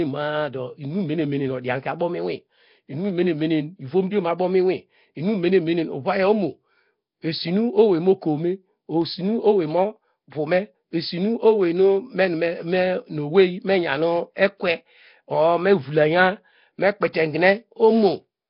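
Nellymoser compression runs throughout the speech, likely from the Nellymoser Asao codec at what sounds like about 22 kbps. Bands too weak to earn bits are replaced with noise, leaving heavy damage: a rough, hissy halo, smeared underwater tone, and nothing above 5.3 kHz.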